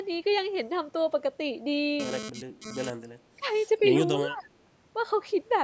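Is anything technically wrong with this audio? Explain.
Yes, the speech has three kinds of fault: a GSM phone buzz, speech suppressed in double talk, and an echo leak.

From 2.00 to 2.90 s a GSM phone buzz sits about 9 dB below the speech. A nearby 2G handset transmitting in bursts 217 times a second is rectified by the audio circuitry. The result is a raspy 217 Hz buzz with many harmonics that comes and goes because the phone is transferring data.

At 2.33 to 2.44 s, 2.60 to 2.77 s, 3.38 to 3.45 s and 4.18 to 4.52 s the speech dips briefly, by around 10 dB and by about 15 dB in the last stretch. This is likely speech suppressed in double talk: the echo canceller, unable to separate near speech from far-end echo while both sides talked, turned the signal down.

From 3.33 to 3.49 s a very faint delayed copy of the speech trails about 293 ms behind. This is likely an echo leak, where a loudspeaker-side echo canceller let part of its microphone pickup through and sent it back down the line.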